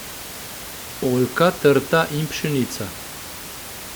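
The speech signal shows no technical faults, with only the room's own background noise sitting about 15 dB below the speech.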